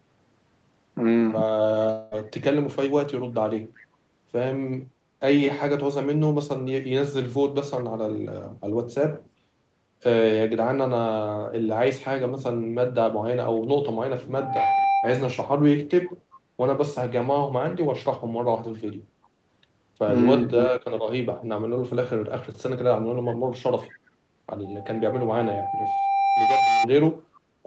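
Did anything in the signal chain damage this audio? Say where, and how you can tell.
Yes. From 1.91 to 2.14 s the sound breaks off and is replaced by a fading buzz or hiss for about 200 ms before it resumes past the gap. This is most likely a long network dropout, with the receiver's concealment filling the hole. A codec artefact would smear sound rather than erase a whole stretch.

At 3.77 to 3.83 s a faint copy of the sound returns about 381 ms later, roughly 30 dB below the direct signal. That discrete, late repeat points to a likely echo leak from a far-end loudspeaker past its echo canceller. Room reverberation would trail off continuously rather than arrive as a single delayed scrap.

A loudspeaker feedback squeal at 787 Hz appears twice. From 14.34 to 15.41 s it swells over a few tenths of a second, and from 24.65 to 26.88 s it climbs over about two seconds. Both times it sits around 5 dB above the signal. 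Its self-sustaining growth distinguishes it from hum or a steady test tone.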